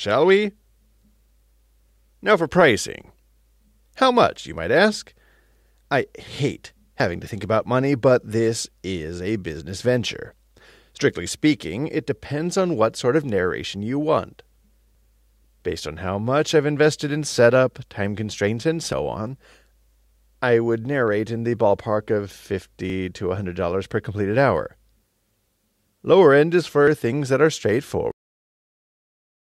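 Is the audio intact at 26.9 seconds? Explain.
No. At 26.87 seconds there is a skip from audio missing between chunks. Roughly 30 milliseconds of sound is gone, and the two sides are butted together with no gap of silence. The result is an abrupt jump where the sound lurches forward. The likely cause is a recorder or processor working in blocks that drops a sliver of audio while closing one block and opening the next. The timing fits blocks of about 4 seconds.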